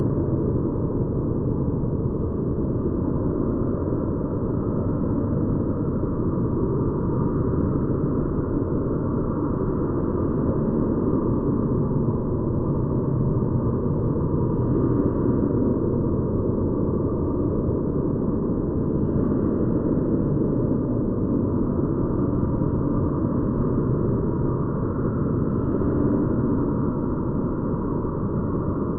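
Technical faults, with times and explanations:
Throughout, channel delay (comb filtering): one channel trails the other by well under a millisecond, and the mono sum cancels near 700 Hz and then about every 1.4 kHz, giving a hollow, phasey tone seen as fixed dark horizontal stripes on a spectrogram.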